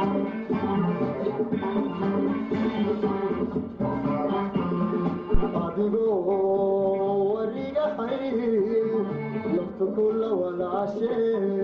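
At 5.34 s a supply, most plausibly phantom power, switched on or off on a live input, and the voltage step passed through the coupling capacitors as a phantom power thump. It lands as a deep low thud peaking near about -10 dBFS, decaying within roughly 22 ms and gone by 5.44 s.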